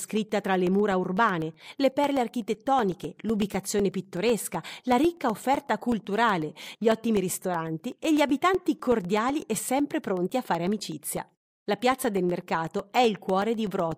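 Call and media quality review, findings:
Periodic USB or driver dropouts, 0.17 to 13.92 s. Regular ticks through the speech, every 0.125 s (8 per second), around a hundred in all. Each is roughly a millisecond of audio replaced by silence, probably a background task stalling the USB bus or audio driver. Unlike random network packet loss, the gaps are evenly spaced, and unlike mains hum or buzz they tick only while speech is present.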